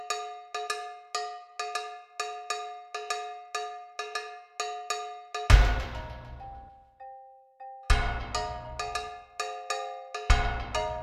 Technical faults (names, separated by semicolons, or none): none